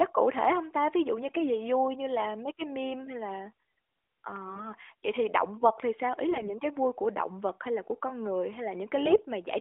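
Brief hoarse, gargly scratchiness breaks into the speech at 4.48–4.68 s, 6.30–6.55 s and 9.06–9.21 s. These are AMR bit errors: a few percent of the less protected bits arrived flipped, garbling the pulse positions and fine parameters of the narrowband codec.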